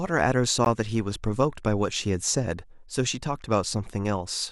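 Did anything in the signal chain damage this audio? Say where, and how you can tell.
Yes. At 0.65 s the speech has a gap at a join of encoded pieces: a silence of about 15 ms, its edges smeared by the codec, after which the sound resumes exactly where it stopped. That continuity separates it from a network dropout, which would lose audio. Untrimmed encoder delay and end padding cause it, with the pieces apparently 4 s long.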